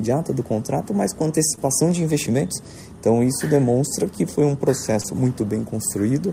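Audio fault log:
1.55–1.59 s and 5.01–5.06 s, short concealed packet loss: twice, about 20 ms of audio didn't reach the decoder in time, and the receiver patched the gap by extending whatever it had last, carrying on the pitch if the sound was tonal or using shaped noise if not, then crossfading back. The fill runs about 17 ms the first time and 26 ms the second, so you hear a quick smear or wobble.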